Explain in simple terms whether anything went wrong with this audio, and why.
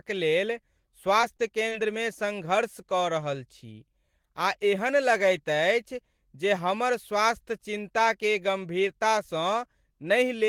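Three tiny glitches come close together early in this speech, at about 1.21, 1.37 and 1.69 seconds, each lasting around 30 to 40 milliseconds. This is short concealed packet loss: roughly 20 milliseconds of sound failed to arrive in time each time, and the receiver covered the hole by stretching the sound just before it. What sets it apart from a plain dropout is that you hear a brief smear or wobble, not a moment of silence.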